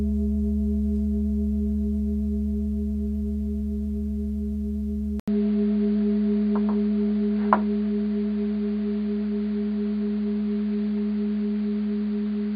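At 5.2 s the input likely switched to a poorer device. After an 80 ms gap, the sound turns dull and boxy, with nothing above 4.8 kHz and a level shift of around 5 dB.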